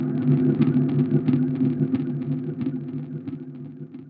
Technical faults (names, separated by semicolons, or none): none